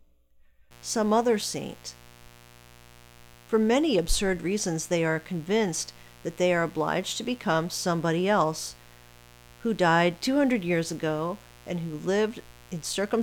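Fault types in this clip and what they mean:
Mains buzz: A 60 Hz supply is leaking into the signal path through something like a dimmer, rectifier or unshielded cable, injecting sharp switching spikes twice per mains cycle, so harmonics of 60 Hz stack up into the kilohertz range. Under this speech it is a steady, raspy buzz that starts at 0.71 s and runs to the end of the clip, sitting roughly 25 dB below the speech.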